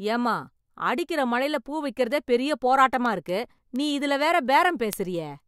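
From 0.24 s to 5.4 s the speech carries word clock ticks, about twenty sharp clicks arriving roughly every fifth of a second. The receiving device is running on its own clock rather than locking to the digital link, which is off by roughly 100 parts per million. At each slip one sample is dropped or repeated. On a spectrogram these appear as thin, evenly spaced vertical broadband lines. In the waveform each one is a single-sample step or glitch.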